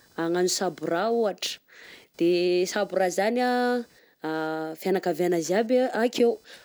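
From start to finish the speech carries computer activity noise: a faint buzzing chirp pulsing at a rate of roughly 500 per second, sitting around 40 dB below the signal. It rises and falls with the machine's processing and input activity rather than with the speech itself. The cause is current drawn by the processor, graphics hardware or mouse shifting the ground that the audio circuit shares, so those load changes ride into the recording as interference.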